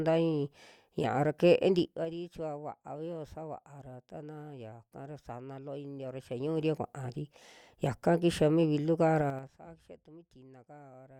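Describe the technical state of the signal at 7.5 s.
At 7.5 s the speech signal is intact, with no dropout, distortion or other fault audible at that moment.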